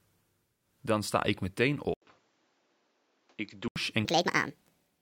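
Input switched to a poorer device, 1.94 to 3.76 s: after an 80 ms gap, the sound turns duller and about 5 dB quieter, with new background noise, likely from a change of microphone. Section at the wrong speed, 4.05 s to the end: the audio plays 1.64 times too fast, roughly ten semitones higher and hurried, likely from playback against the wrong clock.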